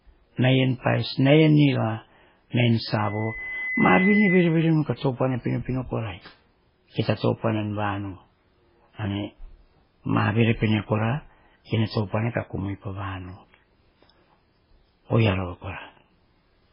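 From the start the speech has a watery, swirling quality with smeared consonants, likely from heavy MP3 compression at a very low bitrate, which fits something near 16 kbps. On a spectrogram everything stops sharply at 5.3 kHz, with weak detail flickering in and out.

From 2.98 to 4.73 s a loudspeaker feedback squeal appears: a microphone picks up its own loudspeaker and the loop runs away at 2 kHz. The tone swells over roughly a second to around 5 dB above the speech, a bright horizontal line on a spectrogram.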